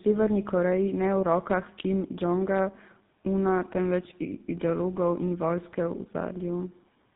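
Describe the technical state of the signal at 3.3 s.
At 3.3 s the speech carries tandem speech coding, which runs through the whole clip. The sound points to two low-rate speech coders in series, something like AMR-NB followed later by GSM full rate. Each one re-encodes the decoded output of the one before, so their errors stack up. The speech sounds rough and muffled, with a warbly, watery edge. Nothing is heard above about 3.8 kHz.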